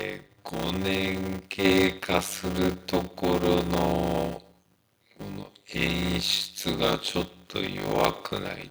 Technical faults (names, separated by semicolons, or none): block size mismatch (padded); microphone volume stepped up